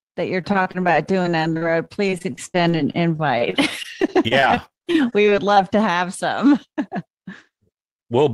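From 0.41 s, right after "that you're", to 5.58 s, just before "to have some", the speech breaks up with repeated packet loss (robotic sound). Dozens of brief holes, none longer than 37 ms, are each patched by stretching the preceding sound, about 14 percent of the stretch in all. Unlike a single dropout's one clean gap, these patches return in quick succession, giving a choppy, robotic texture with fragments missing.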